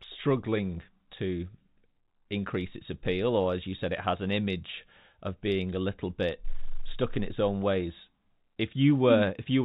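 The speech has passed through a call path that is working normally: its content stops at 4 kHz, a narrowband limit that fits a G.711-style telephone codec, with no disturbance in level, timing or continuity.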